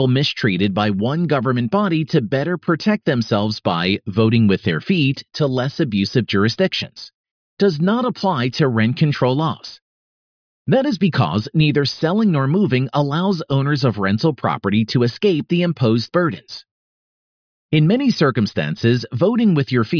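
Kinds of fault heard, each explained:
No technical faults can be heard in this speech recording. There is nothing to list under any fault heading.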